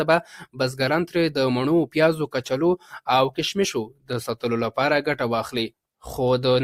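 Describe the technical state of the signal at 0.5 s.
At 0.5 s the sound sinks sharply, falling by about 16 dB between 0.38 and 0.6 s, with roughly 150 ms of that span audibly hollowed out. This is sound cut by the noise suppressor: it judged this passage to be noise and pulled it down harder than the surrounding material.

This dip sits on top of a wider problem, a noise suppressor applied to music or sounds, active across the whole clip. A speech-tuned suppressor keeps turning sustained content and tails down by around 10 dB, so the level pumps rather than holding steady.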